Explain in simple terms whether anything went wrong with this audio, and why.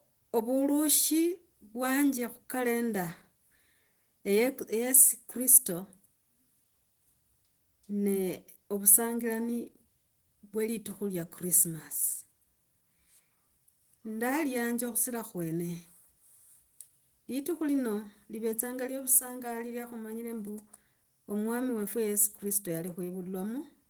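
Yes: the speech carries Opus voice compression from start to finish. The voice is squeezed by a speech-modelling coder, with a separate coarser layer for the top end, leaving a grainy, slightly robotic edge. Unlike simple muffling, the treble is still present; it just sounds rough.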